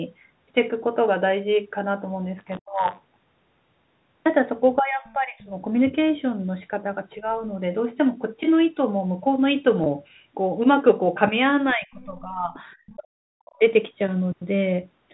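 Buffer tearing from 2.37 to 4.27 s puts a steady 100 Hz robotic buzz on the speech. The writer and reader of the playback buffer have slipped, so each period carries a small slice of audio about 20 ms old.

Speech suppressed in double talk at 2.6 to 2.85 s makes the voice drop out almost completely, by about 40 dB. This likely happened because the echo canceller turned down both talkers while they overlapped.

Speech suppressed in double talk from 4.77 to 5.53 s sinks the voice by about 20 dB. The likely cause is an echo canceller confused by simultaneous talk.

The other side's voice leaking through at 5.08 to 5.12 s is a brief faint scrap about 35 dB down. It is likely residual loudspeaker echo the canceller missed.

Speech suppressed in double talk at 7.2 to 7.41 s is a slight dip of about 5 dB. It likely comes from the canceller briefly ducking during overlap.

Packet loss with pitch repetition at 9.84 s is a 20 ms gap, which fits one lost packet. 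The receiver bridged it by repeating the last pitch period, giving a short held, buzzy moment.

Speech suppressed in double talk from 11.73 to 12.55 s lowers the voice by about 20 dB. It is likely the canceller turning down both sides at once.

The other side's voice leaking through at 12.55 to 12.59 s and 12.86 to 12.95 s appears as scraps about 25 dB down. This is likely echo left in the microphone signal.

Speech suppressed in double talk from 12.96 to 13.63 s cuts the voice nearly out, by about 40 dB. The likely cause is the canceller suppressing everything during overlapping talk.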